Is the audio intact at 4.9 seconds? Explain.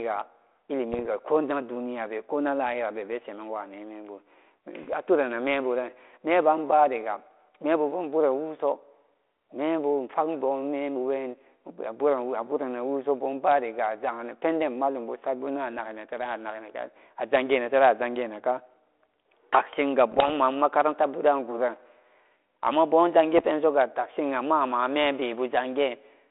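No. From 4.83 to 4.93 s, bit errors on the ADPCM link, at a rate of roughly 0.4 percent, knock the decoder's step size and predictor off track, so pops and rough, level-shifting bursts ring on rather than dropping out cleanly as packet loss would.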